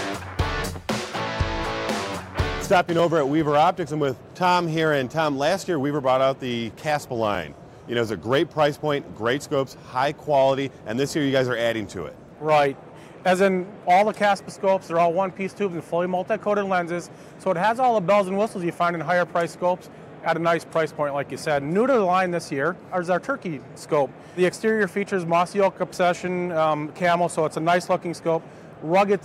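A tick at 2.99 s: a block of digital silence under a millisecond long, where the output buffer likely went unfilled and the sound dropped abruptly to zero.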